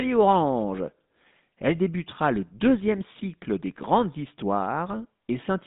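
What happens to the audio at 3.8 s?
At 3.8 s you're hearing GSM full-rate coding, and it's not a one-off. It runs through the whole clip. The speech has been squeezed through the old GSM vocal-tract model, where the excitation is rebuilt from sparse, regularly spaced pulses instead of the real waveform. That's what gives it the buzzy, gravelly edge, and the damage is plainly audible. The band sits at roughly 150 Hz to 3.7 kHz, which fits a 13 kbps full-rate link.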